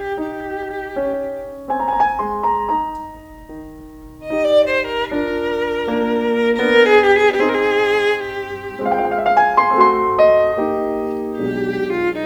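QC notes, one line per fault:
Nothing stood out on listening to this music.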